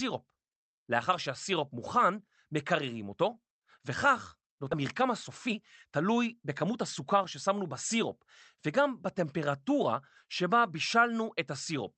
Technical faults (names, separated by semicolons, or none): skip ahead; jitter buffer speed-up